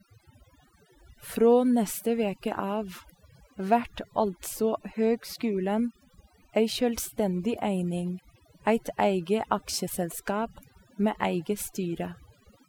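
From start to finish the gaps between phrases fall to near silence dotted with twinkling specks. This is overdone noise removal: a noise reducer set far too strong turned individual frequency bands down or off whenever their level came close to its noise estimate. The softer parts of the voice were cut along with the background noise.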